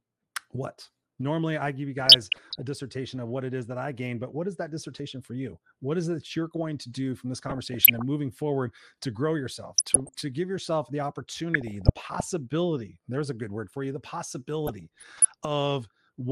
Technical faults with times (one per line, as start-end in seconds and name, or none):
0.00-16.31 MP2 compression
1.98-2.62 DAB burbling
7.35-8.02 DAB burbling
9.76-10.21 DAB burbling
11.54-12.27 DAB burbling
14.67-15.25 DAB burbling